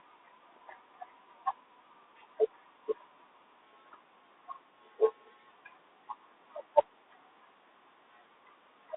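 From start to end, the speech passes through a Bluetooth CVSD headset codec, and the damage is plainly audible. The line is narrow, roughly 250 Hz to 3.7 kHz, so the sound is thin and muffled. The coder sends one bit per sample, stepping up or down, which fits a 64 kbit/s CVSD link. Loud high sounds outrun the step and distort. S sounds turn scratchy, and a granular hiss sits under the speech, with room noise about 24 dB below the speech.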